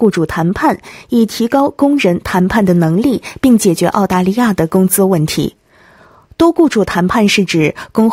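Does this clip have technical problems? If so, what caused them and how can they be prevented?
Yes, there is hard clipping. It appears as a brief tick at 0.04 s, from 1.5 to 2.6 s with peaks about 2 dB over full scale, and from 7.2 to 8.0 s at about 1 dB over. The peaks exceed what the stage can pass, so they are cut flat. This adds crackly high harmonics. The waveform shows squared-off tops, and the spectrogram shows vertical smears reaching high frequencies. Lowering the gain before the clipping stage, or adding a limiter there, would prevent it.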